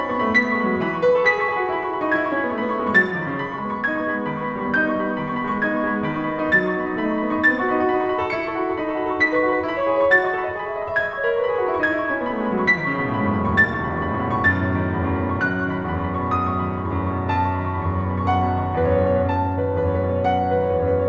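No technical faults occur in this music, which comes through a G.722 call path that carries nothing above 8 kHz.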